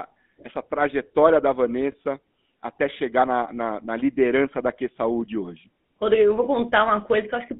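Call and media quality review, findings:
GSM full-rate codec, whole clip: buzzy, gravelly roughness on all speech, plainly audible. Fits 13 kbps full-rate coding; excitation pulses carry little fine detail. Spectrogram shows energy confined to about 200 Hz to 3.7 kHz, with harmonics smeared into coarse, grainy texture.

Lost GSM frames, 1.92 to 1.95 s, right after "essa trajetória da": brief metallic ring held in place of the speech. Fits one lost 20 ms frame, concealed by repeating the last good frame. Spectrogram shows a frozen, horizontally striped patch; waveform shows repeated cycles.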